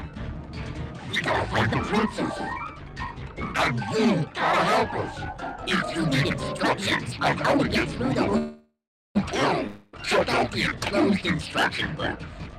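From 8.37 to 9.17 s there is a call audio freeze. The last sound fades into a buzz, then about 0.4 s of silence. Packets were likely held up, and the audio resumes where it stopped, now running 0.78 s late.

From 9.67 to 9.95 s comes a long network dropout. A fading buzz fills the gap. The audio returns with about 0.26 s likely lost in transit.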